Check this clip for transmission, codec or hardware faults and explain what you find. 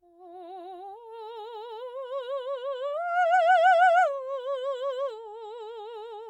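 Nothing stood out on listening to this music clip; no transmission, codec or hardware problem could be heard anywhere in it.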